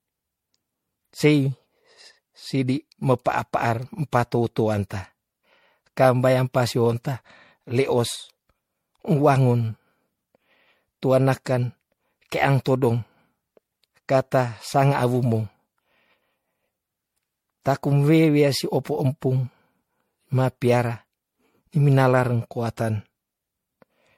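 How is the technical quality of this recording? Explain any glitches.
The recording is impaired throughout by generation loss. Across the whole speech, the sound is swirly, hollow and smeared, with blurred consonant attacks and nothing above 16.5 kHz. It is likely from repeated MP3 encoding, around five passes at what sounds like 64 kbit/s, each re-quantising on a shifted frame grid. That compounding makes it worse than one 64 kbit/s encode would be.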